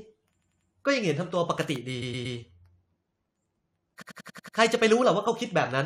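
Repeated frames cause three stutters in the speech. Each time, a short run of compressed frames plays again. From 0.38 to 0.66 s, a 93 ms block repeats three times. From 2.01 to 2.36 s, a 116 ms block repeats three times. From 4.01 to 4.56 s, a 93 ms block repeats six times.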